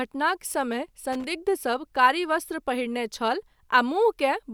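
At 1.13 s, lasting to 1.25 s, the speech is broken by loose connector crackle: a worn or dirty contact briefly making and breaking, chopping the signal. It sounds like a short, irregular scratchy burst. The waveform shows ragged dropouts and spikes, while the spectrogram shows scattered vertical broadband streaks.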